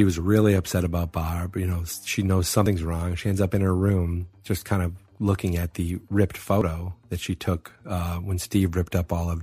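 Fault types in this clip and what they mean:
Audio missing between chunks: two abrupt skips about 4 s apart, roughly 50 ms each, likely lost at chunk joins; waveform shows hard splices, spectrogram vertical seams.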